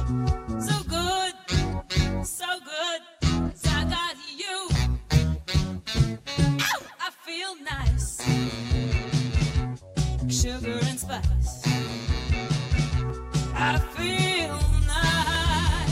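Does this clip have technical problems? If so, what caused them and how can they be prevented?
Yes. Three sharp, isolated clicks occur at 7.81 s, 13.10 s and 15.35 s, each a single instant with no gap in the sound around it. The likely cause is dropped samples: well under a millisecond of the stream went missing at each point, so the waveform leaps straight to a later value and that step is heard as a click. Giving the capture or playback path larger buffers and steady processing priority prevents such losses.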